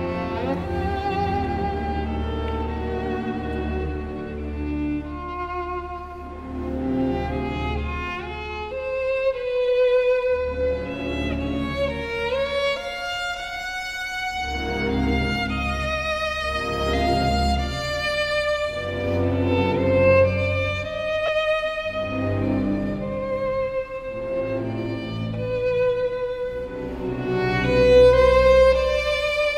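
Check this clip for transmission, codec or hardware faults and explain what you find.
One transmission fault: lost LE Audio frames, from 21.26 to 21.29 s. About 22.5 ms of audio never arrived, which fits three consecutive 7.5 ms LC3 frames dropped on the Bluetooth LE Audio link. The LC3 decoder fills the gap by reusing the last good spectrum with randomised signs, so any tonal content turns briefly into a noisy smear instead of cutting out. A plain dropout would leave a hard gap of silence, with clicks at its edges.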